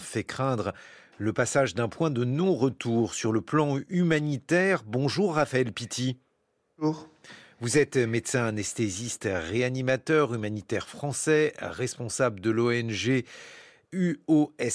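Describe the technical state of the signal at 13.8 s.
At 13.8 s the speech signal is intact, with no audible fault at that moment.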